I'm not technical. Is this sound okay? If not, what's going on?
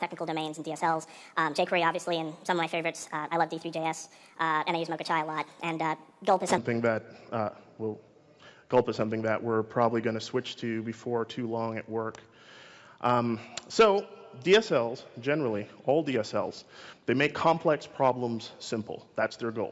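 No. From 0.0 to 6.58 s there is a wrong sample rate fault: the sound runs 1.5 times too fast and about 7 semitones too high, which fits 16 kHz audio played at 24 kHz. Unlike a simple pitch change, speed and pitch rise together.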